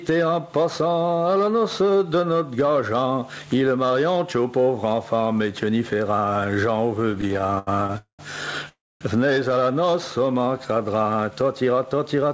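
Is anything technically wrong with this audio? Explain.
Yes, there are several faults.

Gain pumping runs throughout. The gain swings by about 15 dB, pulled down under loud sounds, likely from excessive gain driving a fast limiter.

Repeated stalls (stutter) occur from 7.00 to 7.96 s. The jitter buffer kept running dry, and the receiver extended the last sound through short gaps up to 82 ms, about 29% of that span. The result drags and stutters.

A call audio freeze follows at 7.98 to 8.21 s, and another at 8.69 to 9.03 s. Each fades to silence, for 120 ms and 240 ms, likely from delayed packets, then resumes without loss.

A jitter buffer speed-up runs from 11.30 to 12.30 s. The receiver trimmed about 100 ms of pitch periods, so the sound runs 10% fast at unchanged pitch.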